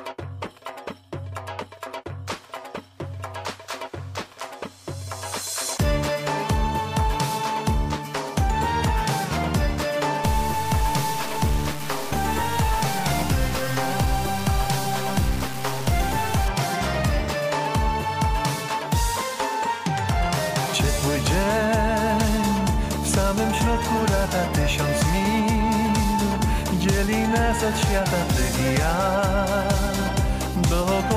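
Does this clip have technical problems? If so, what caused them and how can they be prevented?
Yes. From 10.24 to 16.48 s the sound turns coarse and grainy, with a gritty distortion that moves with the signal. Quieter passages break up and sputter rather than fading smoothly, and the error sits only about 15 dB below the signal. This is low bit depth without dither, likely from a stage that truncated the audio to very few bits, which fits roughly a 4-bit word length. The rounding error follows the waveform instead of forming a steady, neutral hiss. To prevent it, keep the full bit depth through processing and apply dither whenever word length is reduced.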